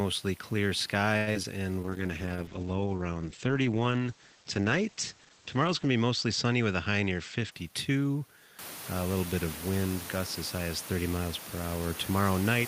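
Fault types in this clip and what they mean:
Short stall from a late packet: A packet arrived late and the jitter buffer ran dry, so the receiver held the last sound from 1.17 to 1.29 s, stretching it by 94 ms. Nothing is lost, but the sound lingers unnaturally.
Short concealed packet loss: Audio failed to reach the decoder in time at 1.33 s and again at 1.43 s, about 60 ms and 20 ms of speech. The receiver extrapolated over each gap and blended back, giving brief smears.
Jitter buffer slow-down: From 1.80 to 2.03 s the receiver rebuilt its reserve by repeating single pitch periods, adding 54 ms. Speech plays at 81% speed without any pitch change, so syllables sound drawn out.
Call bitrate drop: The bandwidth estimate fell and the encoder went from 32 to 10 kbps between 1.84 and 7.58 s, staying at the lowest rate for 4.01 s. Audio bandwidth shrinks from 20 kHz to 8 kHz, making speech muffled and rough.
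Jitter buffer speed-up: Too much audio had built up in the buffer, so from 7.02 to 8.05 s the receiver trimmed short pitch-period pieces, about a tenth of a second in total. Speech runs at 109% speed at the same pitch and sounds hurried.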